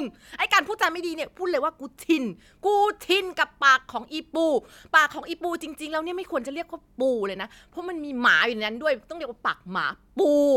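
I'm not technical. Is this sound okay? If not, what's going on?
Yes, no faults heard.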